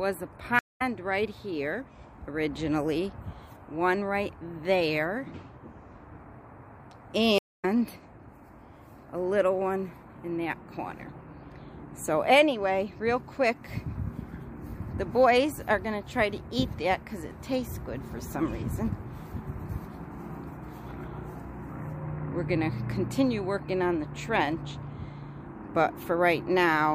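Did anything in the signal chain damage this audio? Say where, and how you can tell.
Yes, at the network stage. There are two stream reconnects. The sound cuts to silence at 0.59 s for 211 ms and resumes at 0.82 s. It drops again at 7.38 s for 249 ms and returns at 7.65 s. Each time the audio picks up around 150 ms further on, so a short stretch of material is simply missing. The connection broke and the player went quiet. It then reconnected and started a fresh decoder partway through the live stream.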